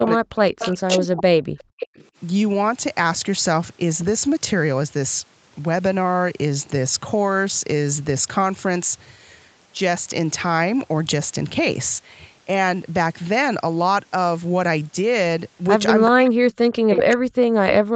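From 0.0 to 1.64 s the voice dips and cuts out in pieces, by about 40 dB at its deepest, most likely speech suppressed in double talk. The canceller ducks the live talker rather than adding anything. An echo leak overlaps it at 0.59–0.71 s and 1.58–1.63 s, then stands alone at 1.8–2.07 s. Unlike the dips, this is a delayed copy of the voice, 378 ms late, at about 10, 30 and 10 dB below the speech. The same suppression returns from 16.11 s to the end, with another 378 ms echo scrap at 16.96–17.02 s, only about 5 dB down.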